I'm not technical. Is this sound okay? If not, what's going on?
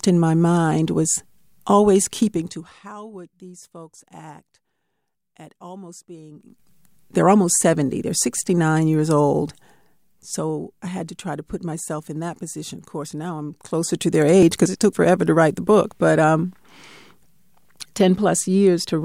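No. While the speech gets quieter or louder, at 2.23 to 2.88 s after "my mind was always", 6.32 to 6.69 s, 9.38 to 10.59 s before "I had to try", and 13.47 to 14.40 s, a fine ticking rides on it. This is zipper noise: the volume moves in small jumps, about ten a second, instead of gliding.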